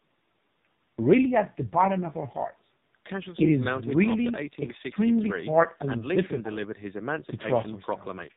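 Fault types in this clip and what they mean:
AMR narrowband mobile codec: the whole clip has been through the old 2G/3G phone speech coder, so everything above 4 kHz is simply gone and the speech sounds boxed-in and dull. The damage is heavy. Voiced parts come out buzzy and synthetic because the codec rebuilds them from a vocal-tract model and a handful of pulses in each 5 ms, which fits one of its lower modes, around 5.9 kbps.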